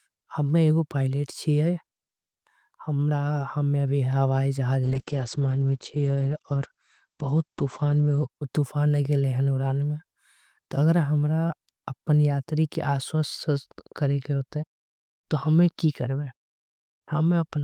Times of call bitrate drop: 4.84-8.35

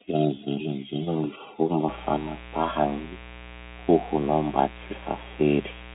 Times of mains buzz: 1.88-5.95

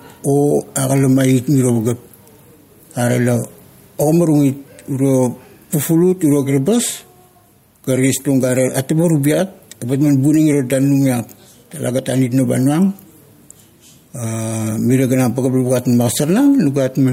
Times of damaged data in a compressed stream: none

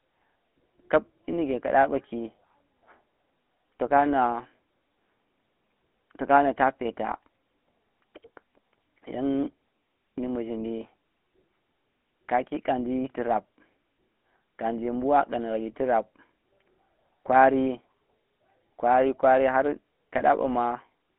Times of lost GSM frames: 20.18-20.21

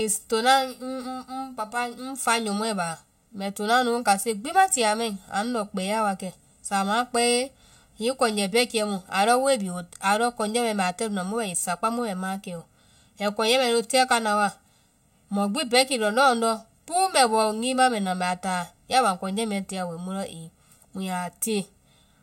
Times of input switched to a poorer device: none

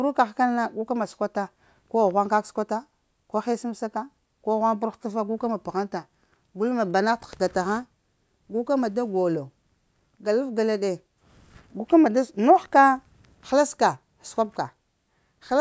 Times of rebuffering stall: none

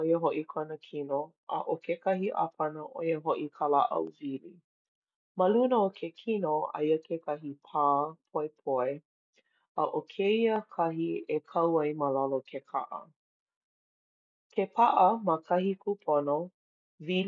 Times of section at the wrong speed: none

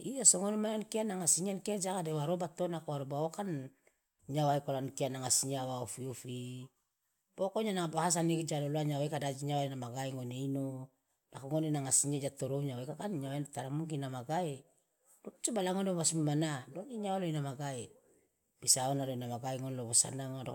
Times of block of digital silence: none

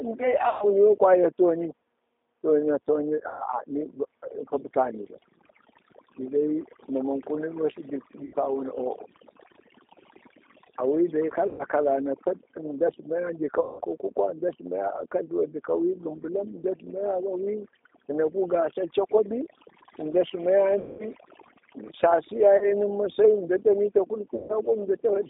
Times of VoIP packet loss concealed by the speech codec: 0.49-0.71, 3.28-3.43, 8.25-8.36, 11.47-11.63, 13.61-13.81, 20.79-21.05, 22.57-22.73, 24.35-24.54

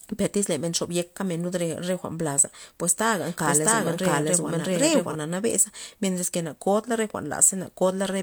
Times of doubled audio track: 3.21-5.15

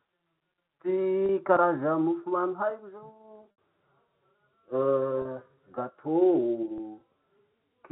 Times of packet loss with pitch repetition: 1.26-1.29, 3.51-3.58, 5.22-5.25, 6.78

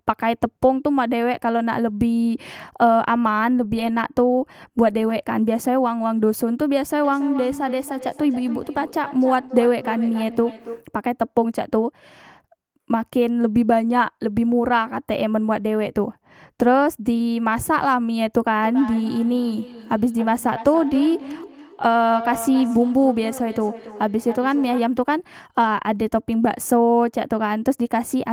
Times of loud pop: none

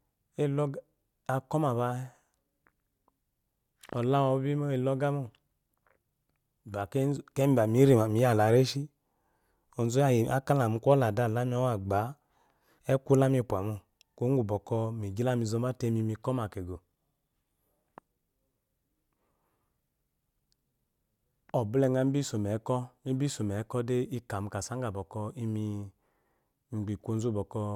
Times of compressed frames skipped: 16.75

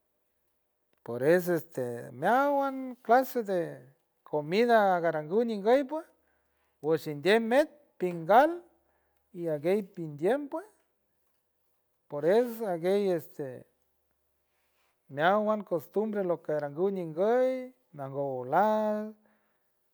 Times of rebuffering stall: none

